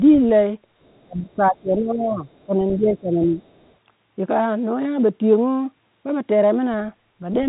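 From 0.83 to 1.04 s, then 2.18 to 2.44 s and 3.44 to 3.73 s, the other side's voice leaks through very faintly, far below the talker, likely residual loudspeaker echo the canceller missed. Between these, from 1.04 to 2.24 s and 2.46 to 3.37 s, speech is suppressed in double talk: the talker drops by up to about 15 dB, likely because the echo canceller turned both voices down while both sides spoke. Throughout, the telephone band stops near 3.8 kHz.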